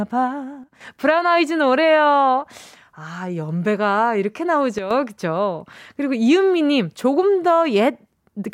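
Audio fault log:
0.64–0.81 s and 4.78–4.91 s: sudden gain jump. Speech and background noise drop together by about 8 and 9 dB, likely from an unramped digital gain step.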